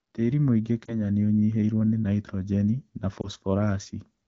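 A brief dip and warble at 0.86 s and again at 3.22 s come from lost AMR speech frames: each time one 20 ms frame failed its checksum and the decoder briefly reused the previous frame's pitch and vocal tract settings.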